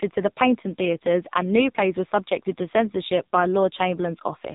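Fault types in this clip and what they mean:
AMR narrowband mobile codec: The speech has been through the AMR-NB mobile codec, which samples at 8 kHz and rebuilds the voice from a vocal-tract model driven by a handful of pulses per 5 ms subframe. Nothing above 3.8 kHz survives, so sibilants and breath detail are gone and the sound is boxy. The damage is heavy throughout, with a buzzy, synthetic quality that points to one of the lowest modes, around 5.9 kbps.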